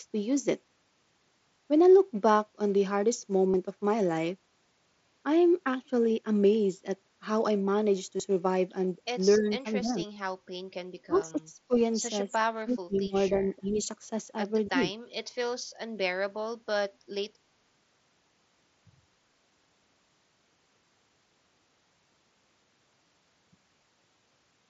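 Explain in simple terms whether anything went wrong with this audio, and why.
A few things went wrong here, in three different ways.

First, concealed Bluetooth headset packet loss. The headset briefly lost bits of audio on the way to the phone, and the phone filled each gap by repeating a snippet of what came just before. That happens at 2.44 and 10.15, where it's nearly invisible, and for a bit longer at 3.52 to 3.54 and 8.17 to 8.20, where you might catch a tiny buzzy blip.

Second, speech suppressed in double talk. The speech dips or partly drops out at 9.38 to 9.65, 9.81 to 10.05, 11.06 to 11.72, 12.02 to 12.38, 12.54 to 13.42, 13.60 to 13.88 and 14.68 to 14.83. The likely cause is the other person talking at the same moment, so the echo canceller turned everything down. The worst dips are around 11.1 to 11.7 and 12.5 to 13.4.

Third, an echo leak, a faint delayed copy of the speech arriving roughly a quarter of a second late, around 11.15 to 11.22. 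It's quiet and brief. It's most likely the far end's loudspeaker being picked up by its microphone and not fully cancelled.

Underneath all this, the headset's mSBC codec adds only a light graininess.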